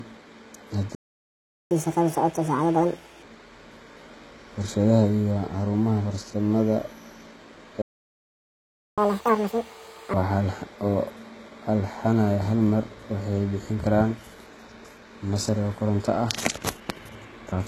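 Throughout, the speech carries gritty, lispy treble, likely from HE-AAC compression at a rate that points to around 16 kbps, with rebuilt upper bands that don't match the harmonics below.

At 0.95 s the player likely ran out of data: a playback stall silences the speech for 0.76 s, until 1.71 s. It resumes with catch-up at higher speed, playing the backlog at 1.5 times normal speed with pitch raised by roughly seven semitones, before settling back at 3.23 s.

A second stall, again likely a data shortfall, cuts out from 7.82 to 8.98 s, about 1.16 s. The catch-up that follows runs at double speed, with pitch up by roughly ten semitones, and returns to normal at 10.14 s.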